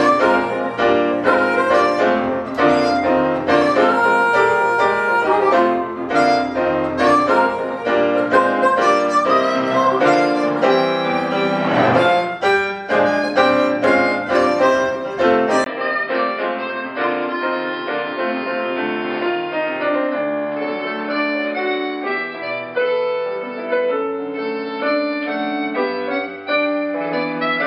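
At 15.64 s a brief gap of about 20 ms breaks the sound. From there to the end it turns dull and boxy, with nothing above 5.1 kHz, a few decibels quieter, over a faint new background noise. This likely marks an input switched to a poorer device.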